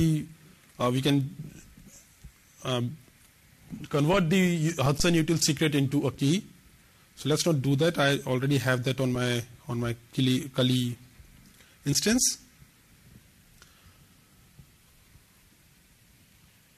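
At 11.91 s, damaged data in a compressed stream causes a brief blip. Corrupted bytes made the decoder misread a frame and lose sync momentarily.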